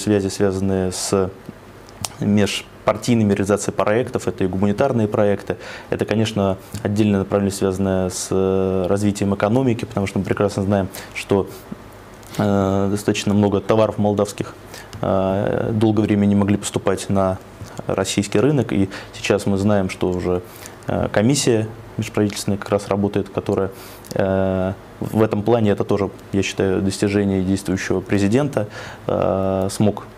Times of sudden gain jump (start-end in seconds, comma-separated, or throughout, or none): none